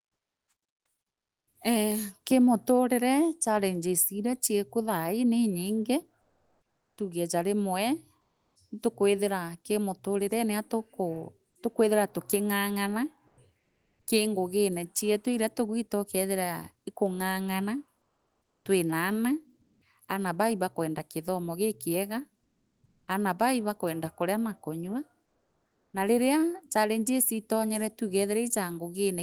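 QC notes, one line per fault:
1.07–1.53, 6.21–8.55, 13.27–14.07, 18.01–19.81, 22.43–23.07 (after "baa ibakwenda kithomo gikinga"), 25.25–25.93 s (after "ibakwenda kana na kanyua"): comfort noise in place of the background. Real room tone becomes steady synthetic hiss, about 7 dB and 11 dB quieter at 1.07 and 22.43 s and about 1 dB louder at 25.25 s. This is likely discontinuous transmission of the Opus DTX kind. The spectrogram shows a smooth, featureless band with a level step at each edge.
13.27–13.37 s: sound dropped by the voice detector. About 40 ms of speech vanishes into steady noise, likely because the detector mistook it for background. The waveform shows speech energy cut flat into an even noise floor, and the spectrogram shows speech harmonics ending abruptly.
18.54–18.65 s: onset clipped by the voice detector. The first 110 ms of a word are replaced by comfort noise, likely because the detector reacted late, so the word starts abruptly. 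The waveform shows a hard vertical attack with no ramp, and the spectrogram shows harmonics appearing fully formed.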